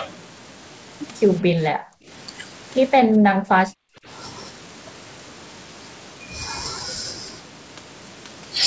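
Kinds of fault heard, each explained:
Speech suppressed in double talk: the speech plunges, by roughly 40 dB at worst, from 1.42 to 2.10 s and again from 3.03 to 4.07 s, losing about half a second, then about a second. That's likely an echo canceller mistaking overlapping talk for echo.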